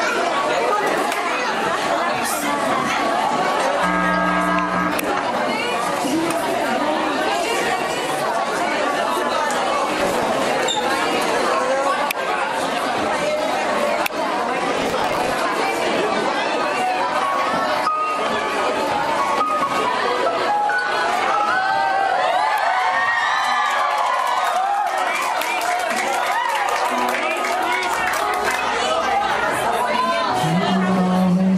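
Processor overload crackle appears from 9.98 to 10.27 s and again, longer, from 14.77 to 15.32 s. Audio buffers of around 5 ms miss their deadlines in rapid succession, each replaying stale audio with hard edges, producing a gritty tearing burst that stops once the load eases.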